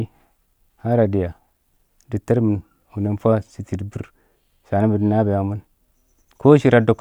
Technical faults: none

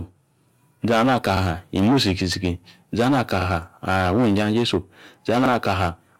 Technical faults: overlapping chunks

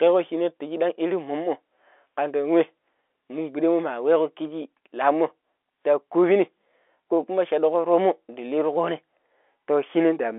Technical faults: none

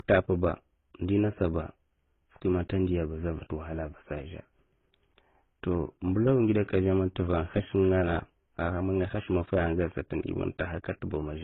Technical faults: transcoding between lossy codecs

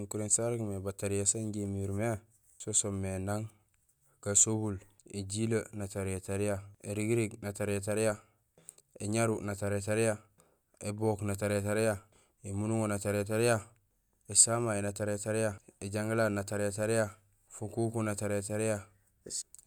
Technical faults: none

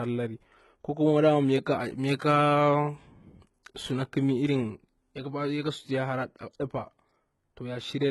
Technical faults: HE-AAC compression

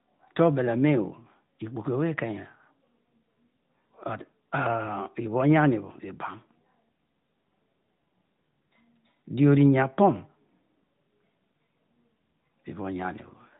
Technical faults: none

